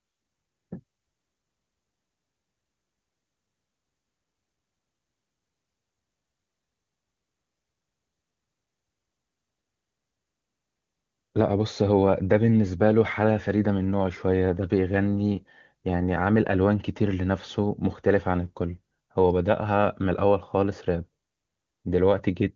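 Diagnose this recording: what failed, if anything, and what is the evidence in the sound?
Nothing has failed in this recording, and no stage of the chain leaves audible damage. The speech has the roughly 7 kHz bandwidth of an AMR wideband (HD Voice) codec path, with little or no coding roughness, which points to one of its highest rates, around 23.85 kbit/s.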